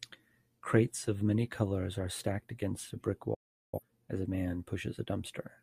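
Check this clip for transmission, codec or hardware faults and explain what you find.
One transmission fault is present, a digital broadcast dropout from 3.34 to 3.81 s, between "stacked against a brick" and "as a man". The receiver stopped decoding valid frames and muted, fading out over about 8 ms. Roughly 384 ms of speech is missing, which fits about nine lost frames. The silence then ends and speech resumes partway through the sentence.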